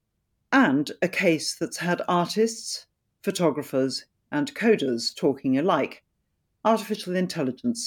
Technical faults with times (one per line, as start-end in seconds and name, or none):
none